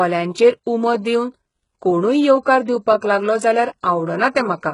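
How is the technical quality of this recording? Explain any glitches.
The quality's poor: the speech runs through a heavy, lossy codec the whole way. Across the full clip, everything above 11 kHz is gone, and the sibilants sound gritty and lispy with a metallic top. That's likely HE-AAC compression at a very low bitrate, around 12 kbps. The upper band is faked by copying lower bands up, so the harmonics don't line up.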